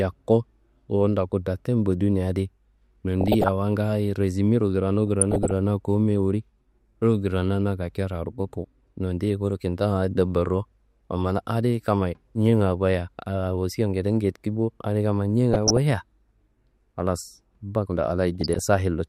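Speech, with DAB burbling in four short bursts: 3.21 to 3.49 s, 5.07 to 5.51 s, 15.51 to 15.78 s and 18.41 to 18.65 s. Each burst puts short blips of noise into single sub-bands of the speech, with sub-bands jumping in level where scale factors are hit. Weak reception lets bit errors slip past error correction into the MP2 audio data. A fraction of a percent is enough to corrupt samples and scale factors across 12 to 19 frames per burst.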